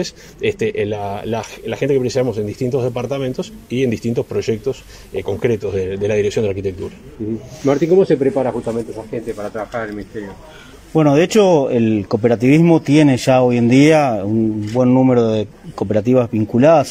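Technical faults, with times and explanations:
0.90–5.70 s, digital radio blending to analogue: the receiver lost its digital stream and cross-faded over 140 ms to the same station's FM broadcast, so hiss rises to roughly 35 dB below the signal and level drops about 1 dB until it blends back.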